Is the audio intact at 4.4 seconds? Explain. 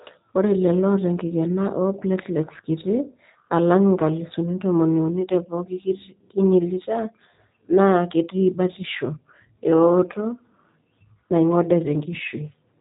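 No. At 4.4 seconds, as everywhere in this speech clip, the signal has passed through the G.729 codec, most likely the G.729A variant. Instead of storing the waveform, it rebuilds each 10 ms frame from a vocal tract filter, a pitch predictor and a few pulses, at a rough, synthetic quality that fits an 8 kbit/s budget. The damage is plainly audible: the voice sounds coarse and synthetic, and nothing above 3.8 kHz survives.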